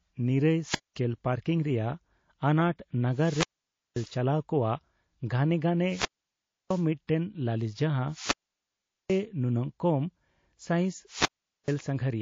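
Across the whole clip the speech has a watery, swirling texture, with dull treble and chirping on sibilants. This is plainly audible damage that is likely from MP3 compression at a low bitrate, and the sound fits something around 32 kbps. With so few bits available, the encoder cuts off the top of the spectrum and drops weak frequency lines. Those lines flicker in and out from frame to frame, which produces the swirl and smears consonant onsets.

Wireless microphone squelch dropouts occur five times: 0.63 to 1.01 s, 3.11 to 4.18 s, 5.84 to 6.85 s, 8.08 to 9.24 s, and 11.07 to 11.78 s. In each one, hiss swells as the FM radio signal fades. The receiver's squelch then mutes the output, leaving a near-silent hole of roughly 220, 530, 660, 780 and 430 ms respectively. Then the voice comes back.

Pre-echo appears at about 11.64 s, inside the last dropout. A short burst of hiss, about 17 dB above the quiet floor, leads the attack by about 41 ms, and the onset itself sounds soft. 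The codec spread its quantisation noise across a long transform block of about 72 ms, so noise sized for the loud attack also filled the silence before it. The smearing suggests the encoder never switched to short blocks here.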